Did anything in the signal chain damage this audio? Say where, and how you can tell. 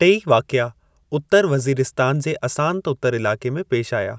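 No, no damage is audible.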